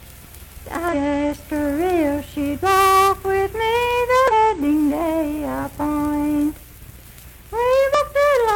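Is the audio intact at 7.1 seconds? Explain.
Yes, at 7.1 seconds the audio plays through cleanly, with no dropout, click, distortion or other fault to be heard.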